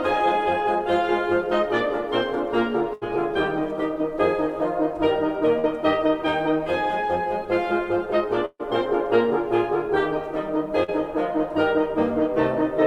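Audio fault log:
2.93–3.03 s, burst of packet loss: about 80 ms of the music drops out. The receiver holds the last sound and fades it, then jumps ahead.
5.59–5.65 s, short concealed packet loss: a 40 ms hole is patched by extending the preceding sound, heard as a brief smear before the music rejoins.
8.45–8.61 s, burst of packet loss: 140 ms goes missing. The held, fading fill dies into about 40 ms of silence before the music resumes further on.
10.83–10.90 s, short concealed packet loss: about 40 ms is lost and covered by a 45 ms continuation, heard as a quick wobble blended back into the music.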